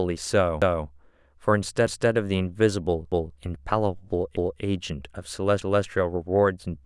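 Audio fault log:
0.62–0.87, 1.87–2.12, 3.12–3.37, 4.37–4.62, 5.62–5.87 s: overlapping chunks. The speech is handled in 1.0 s chunks, each starting 250 ms before the previous one ended, so a quarter-second of speech plays twice at every join, heard as a stutter every 1.25 s. Unlike dropouts, nothing is missing. Material is repeated, and the strict, even spacing separates it from random buffer glitches.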